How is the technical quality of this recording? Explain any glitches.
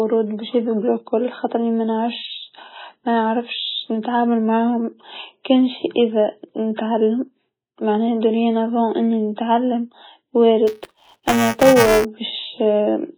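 Technical quality is poor: the speech is heavily degraded throughout, and a mechanical buzz appears near the end.

MP3 compression, throughout: the sound is watery and swirly with smeared consonant attacks. The likely cause is an MP3 encoder starved of bits, pointing to a rate near 16 kbps, cutting the treble and dropping weak frequency components frame by frame.

Buffer tearing, 10.67 to 12.05 s: the audio-writing program and the playback hardware slipped out of step, so each buffer carries a small slice of audio from the previous lap, about a hundredth of a second old, with abrupt joins. This produces a robotic 345 Hz buzz, consistent with a 128-sample buffer.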